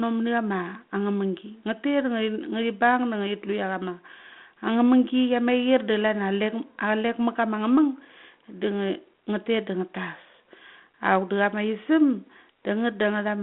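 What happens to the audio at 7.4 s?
Nothing goes wrong at 7.4 s: the audio is intact there, carried through the 32 kbit/s G.726 ADPCM telephone path with its usual 200 Hz to 3.4 kHz band and only light coding roughness.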